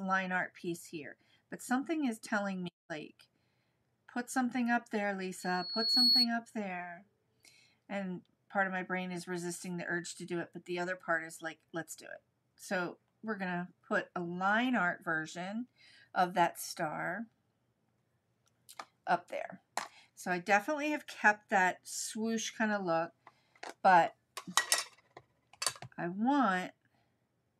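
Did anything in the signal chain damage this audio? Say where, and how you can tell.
Yes. A loudspeaker feedback squeal appears from 5.39 to 6.29 s: a single 4.4 kHz tone that swells over roughly 0.7 s to sit about 10 dB above the signal. This is an acoustic loop in the analogue stage, where the microphone picks up its own loudspeaker and loop gain exceeds unity at that frequency.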